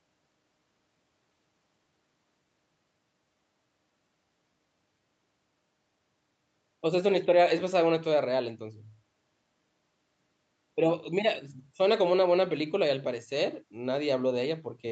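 Speech, with no technical faults to report.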